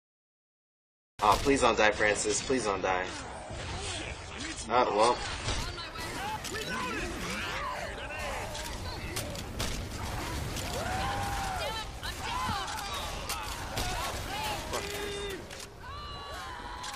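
The audio opens with a cut-off start: digital silence until 1.19 s, then the sound enters abruptly mid-event with no attack or fade. Capture or streaming evidently began late, truncating whatever was already sounding at that instant.

From 1.58 s to 5.58 s, the adaptive stream drops to a lower bitrate. Content above 10 kHz disappears and codec artefacts thicken, consistent with a switch from roughly 96 kbit/s AAC to about 24 kbit/s. Quality changes suddenly at both boundaries, with no gap.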